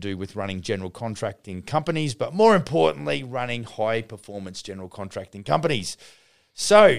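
No technical faults can be heard anywhere in the speech recording; the signal stays continuous and intact throughout.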